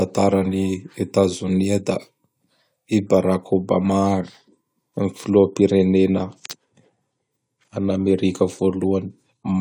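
No technical faults can be heard anywhere in the speech. Nothing in the sound calls for comment at any moment.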